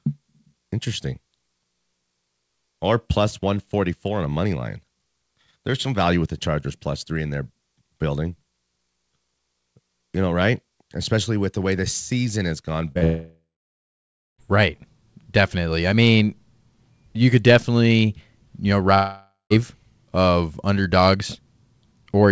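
Short concealed packet loss occurs right after "the season has gone", at 12.92 to 12.98 s and again at 12.98 to 13.04 s. Two consecutive gaps of about 30 ms each never reached the decoder in time. The receiver extended the last sound to cover them, which is heard as a brief smeared wobble.

A long network dropout follows directly from 13.04 to 14.41 s. The held sound fades into roughly a second of silence, likely because no audio arrived for about 1.35 s, and the speech resumes with that stretch missing. A shorter dropout of the same kind, from 18.94 to 19.53 s, is heard as a fading buzz or hiss, then about 0.17 s of silence, with about 0.57 s of audio lost. Throughout, the call codec leaves nothing above 8 kHz.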